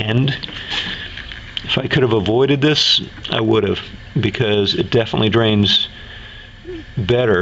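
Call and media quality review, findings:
Gain pumping, throughout the clip: gain swing of around 5 dB. Likely cause is input gain set too high with a fast limiter clamping peaks. Unlike codec artefacts or the 8 kHz band limit of the call path, the level breathes in step with loudness.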